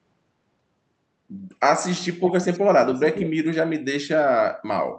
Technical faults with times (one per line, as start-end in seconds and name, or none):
2.24-2.60 echo leak
2.93-3.28 echo leak